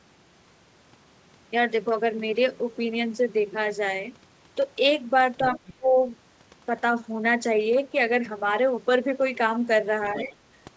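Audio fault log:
5.44–5.74 s and 10.17–10.24 s, other side's voice leaking through: a faint second voice sits under the talker, about 15 dB below the speech in the first stretch and about 20 dB below in the brief second one. It is band-limited, with nothing above 8 kHz, like the rest of the call audio. The likely cause is the far end playing from the talker's loudspeaker back into the microphone, with the echo canceller leaving a residue.
5.77–5.96 s and 10.17–10.34 s, speech suppressed in double talk: the talker's level dips while the other side's sound overlaps. The first dip lasts about a fifth of a second and goes deep, roughly 25 dB, so the speech nearly drops out. The second dip, about 150 ms long and overlapping the leaked voice, is shallower at around 10 dB. This likely happens because the echo canceller, faced with both sides at once, attenuated everything rather than separating the talker from the echo.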